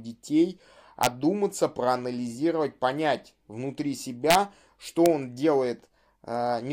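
Violent, sharp cracks hit the speech at 1.03 to 1.07 s, at 4.31 to 4.35 s between "проанализировать понять внутри" and "что он", and at 5.06 s. This is integer overflow: peaks pushed about 0 to 2 dB past the limit wrap to the opposite sign instead of being held.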